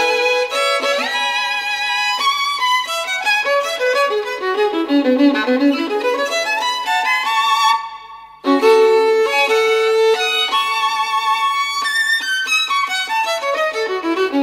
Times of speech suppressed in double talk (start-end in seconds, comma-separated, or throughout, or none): none